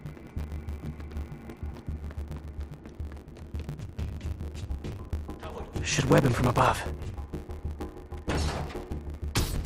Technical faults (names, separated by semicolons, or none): block size mismatch (truncated); skip ahead; jitter buffer speed-up